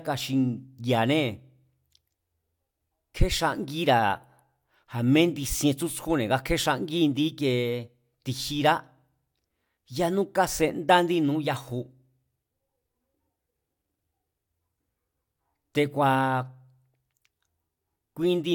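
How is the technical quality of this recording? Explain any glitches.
Technically sound, with no glitches or faults anywhere in the speech recording.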